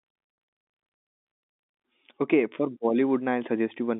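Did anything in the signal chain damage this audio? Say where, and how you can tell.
No, nothing in the signal chain damaged this audio.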